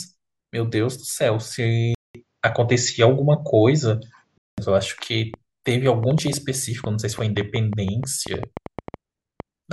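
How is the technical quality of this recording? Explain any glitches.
Two glitches stand out in this speech recording.

An input switch to a poorer device from 1.95 to 4.58 s likely occurred. A 0.2 s gap starts it, then nothing above 7.6 kHz, a slight level shift and a faint new noise floor.

A train of clicks runs from 5.34 to 9.41 s, likely from interference. About twenty similar pops come at an uneven 5.4 per second and rise well above the speech.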